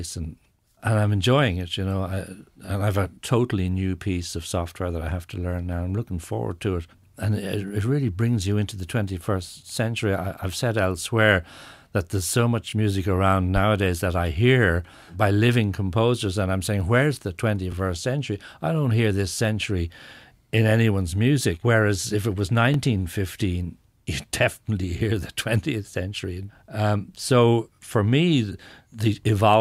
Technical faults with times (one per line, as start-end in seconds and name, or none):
2.66-2.68 overlapping chunks
7.68-7.70 overlapping chunks
12.70-12.72 overlapping chunks
17.72 overlapping chunks
22.74-22.76 overlapping chunks
27.76 overlapping chunks